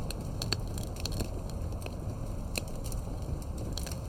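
Throughout, a faint metallic shimmer sits over a dulled top end. This is imaging from linear upsampling, which leaves mirror images between 11 and 22 kHz, roughly 25 dB down.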